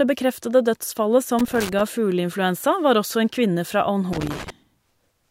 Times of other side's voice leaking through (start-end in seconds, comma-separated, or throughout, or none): none